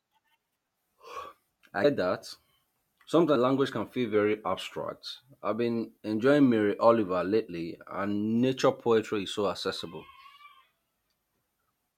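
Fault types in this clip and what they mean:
Compressed frames skipped: At 1.83 s and 3.35 s the speech jumps forward. Each jump loses around 150 ms, which fits about seven 21.3 ms frames that were missing or rejected by the decoder.
Drift correction step: From 4.15 to 4.89 s, and again from 10.00 to 10.64 s, the speech slows by 5.47% and drops about 97 cents, nearly a semitone, then snaps back. This is likely a clock-matching step that lowered the playback rate to rebalance its buffer.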